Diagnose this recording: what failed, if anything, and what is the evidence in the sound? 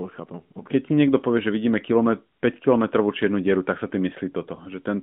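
At 4.56 to 4.60 s there is a brief dip and warble: a lost AMR speech frame, a network-stage fault. Its length fits a single 20 ms frame. The decoder filled it by repeating the last pitch and vocal tract settings at lower gain, so the sound bends rather than dropping to hard silence as a buffer dropout would. The surrounding narrowband sound, limited to about 150 Hz to 3.6 kHz, comes through the AMR-NB mobile codec.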